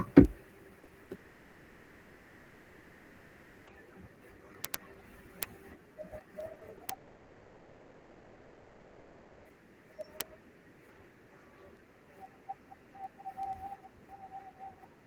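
From 0.15 s to the end, word clock ticks sound roughly every tenth of a second: sharp clicks of uneven strength. A receiver running on its own clock, off by something like 200 parts per million, drops or repeats a single sample at each slip. The steady spacing across the whole clip separates them from network faults.

Between 0.79 and 1.11 s, repeated packet loss gives a choppy, robotic stretch. Five holes, the longest 40 ms and about 120 ms in total, are each patched by extending the preceding sound, so about 38% of that span is synthetic. The rapid run of short gaps distinguishes this from a single long outage.

From 1.15 to 3.69 s, the last sound is drawn out into a fading buzz for about 2.5 s, and the audio then comes back without the part that was lost. This is likely a long network dropout. Unlike the burst just before it, there is one unbroken fill rather than repeated chopping.

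Short concealed packet loss appears at 6.53, 6.59 and 6.77 s. Each 20 ms hole is filled by continuing the previous sound and blended back, heard as a brief smear or wobble. They are isolated events, too short and sparse to turn robotic.

From 6.93 to 9.50 s, another fading continuation replaces about 2.5 s of audio, again likely a long network dropout.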